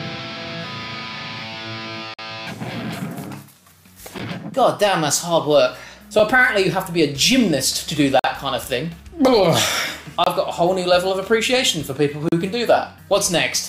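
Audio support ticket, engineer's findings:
Gap between stream segments at 2.14–2.19 s, 4.18 s, 6.19 s, 8.19–8.24 s, 10.24–10.27 s, 12.29–12.32 s. Hard-edged silent dropouts recurring roughly every 2 s, lasting from a few ms up to about 49 ms. Probable component: segment timeline at the player. Adjacent 2 s segments' timestamps leave a gap, which the player pads with silence. The sound stops and resumes abruptly, and no audio is lost.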